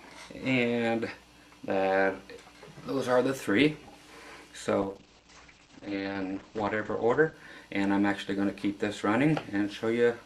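A call bitrate drop runs from 4.82 s to 7.41 s. The encoder's bit budget collapsed, which fits a fall from 48 kbps to about 10 kbps, so the audio is coded coarsely and its bandwidth narrows from 20 kHz to 8 kHz, sounding rough and muffled.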